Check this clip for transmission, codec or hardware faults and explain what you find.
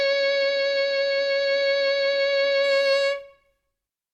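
One fault is present. From 0 to 2.64 s the music sounds dull, with nothing above 6.9 kHz, then abruptly brightens without a gap. This is an adaptive stream starting at a low bitrate, which fits an AAC stream stepping up from about 24 to 96 kbit/s.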